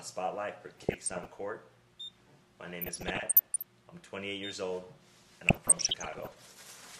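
Weak DAB reception is letting bit errors slip past error correction into the MP2 audio data, where corrupted samples put short blips of noise in single sub-bands and corrupted scale factors make sub-bands leap in level for up to a frame. The result is DAB burbling over the sound from 0.70 to 1.40 s, 2.65 to 3.63 s and 5.47 to 6.39 s, with the density pointing to an error rate of roughly half a percent in the first two stretches and about 0.7 percent in the last.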